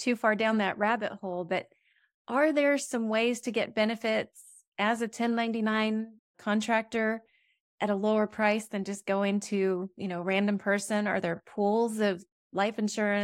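No technical faults can be heard anywhere in the speech.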